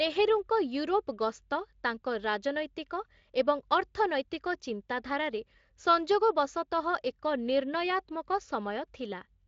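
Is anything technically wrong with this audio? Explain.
No, nothing here is technically wrong.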